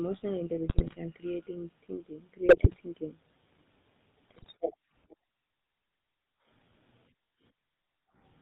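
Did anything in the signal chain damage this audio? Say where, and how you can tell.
Yes. The codec stage damaged the whole clip. It carries the sound of the GSM full-rate codec from start to finish. Nothing is audible above 4 kHz. The speech has a steady buzzy, gravelly roughness, and the damage is plainly audible. That texture fits the 13 kbps full-rate scheme. It models the vocal tract and drives it with a coarse, regularly spaced pulse excitation. Much of the fine detail between those pulses is simply thrown away.

GSM bit errors on the radio link add three short bursts. The first runs from 0.68 to 0.99 s and ends just before "and creating thinking". The second runs from 2.48 to 2.81 s, right after "and creating thinking". The third runs from 4.28 to 4.53 s. Each burst breaks into squawks, pops and gargling. Corrupted filter, pitch and gain values reached the decoder. That bends the spectrum or jumps the level frame by frame. 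The damage points to an error rate of a few percent.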